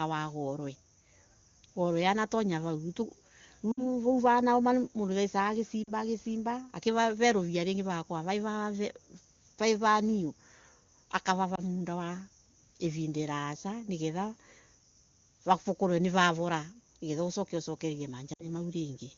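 You can hear lost AMR speech frames four times. The first runs from 3.72 to 3.84 s, then 5.84 to 5.91 s, 11.55 to 11.61 s and 18.33 to 18.49 s. The gaps come to about 60, 40, 20 and 60 ms, which fits runs of three, two, one and three 20 ms frames. Each time, the decoder holds the last good pitch and vocal-tract shape at falling gain. So you get a short dip or warble, falling to near silence in the longer runs, under the wideband coding before speech comes back a bit thin.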